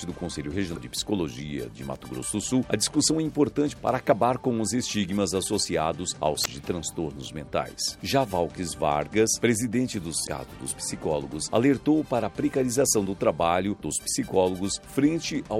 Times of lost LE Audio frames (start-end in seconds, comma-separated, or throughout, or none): none